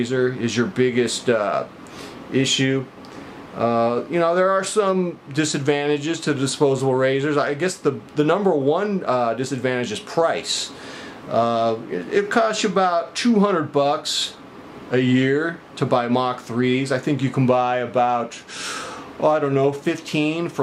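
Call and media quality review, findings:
No call or media quality faults found in this recording.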